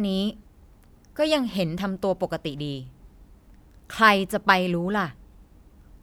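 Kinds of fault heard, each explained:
Nothing to flag here: the speech comes through without any technical faults to point out.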